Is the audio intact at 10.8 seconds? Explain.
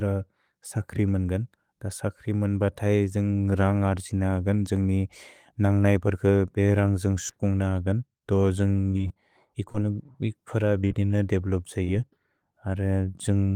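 No. Two brief smears, from 10.82 to 10.85 s and from 10.88 to 10.92 s, are short concealed packet loss: about 20 ms of audio each time arrived too late and was filled by extending the preceding sound.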